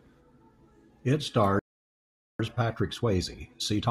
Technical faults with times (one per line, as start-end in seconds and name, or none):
1.59-2.39 playback stall
2.39-3.91 time-compressed catch-up